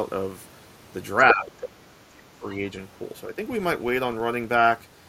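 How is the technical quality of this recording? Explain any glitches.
The recording has three distinct technical problems: a steady buzz running through the whole clip, a burst of far-end echo, and two places where the speech is pushed down during overlapping talk.

The filter restarted on every block affects the entire clip. A processing filter discards its memory at each block boundary and begins from zero, so every block opens with a small transient. Those transients repeat 25 times a second and fuse into a low buzz or ticking texture that rises and falls with the speech level, louder on strong syllables and fading in pauses.

The other side's voice leaking through appears from 1.29 to 1.51 s. For roughly a fifth of a second, a second voice sits alongside the talker at about the same loudness. This is likely loudspeaker sound reaching the talker's microphone that the echo canceller failed to subtract. 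Because the residue is only partly cancelled, it comes through as a short scrap.

Speech suppressed in double talk starts at 1.31 s, overlapping the leak, and lasts until 2.44 s. The talker's level drops by up to about 20 dB in places, with the affected portions adding up to roughly a second, so the voice sounds dipped and patchy. A second, much milder dip of a few dB occurs from 3.33 to 3.41 s. The likely cause is an echo canceller that could not separate near-end speech from echo and turned everything down.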